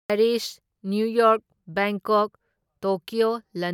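No technical faults can be heard anywhere in this recording.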